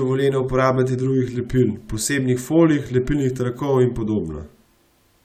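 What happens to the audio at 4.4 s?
Nothing goes wrong at 4.4 s; the audio is intact through that moment, with no dropout, click or distortion.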